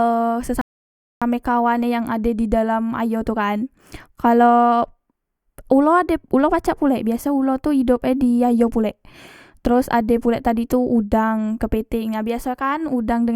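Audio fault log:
0.61 to 1.22 s, rebuffering stall: the speech stops dead and the line goes silent for about 0.6 s. Then it picks up at the exact point where it broke off. No syllable is skipped or repeated. The playback simply paused because the player had used up its downloaded audio and had to wait for more data to arrive. That wait shows up as a gap, so about 0.6 s is added to the running time.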